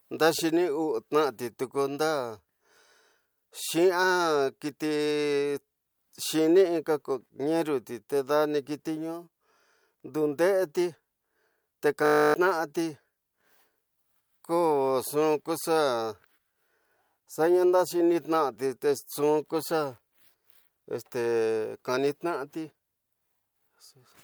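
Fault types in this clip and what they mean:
System hang loop: At 12.06 s the speech gives way to a steady buzz that lasts until 12.34 s, pitched at 50 Hz because one 20 ms slice of audio repeats exactly, 14 times over. The computer or its audio driver stalled while the sound hardware kept replaying the same ring buffer, which fits a buffer of about 20 ms. Roughly a third of a second of real speech is lost beneath the buzz.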